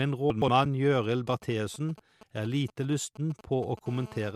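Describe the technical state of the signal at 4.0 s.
A hard, raspy 217 Hz buzz sits steadily under the speech, about 21 dB down, from 3.87 to 4.31 s: GSM phone buzz, where a nearby handset's call bursts are rectified by the audio circuitry.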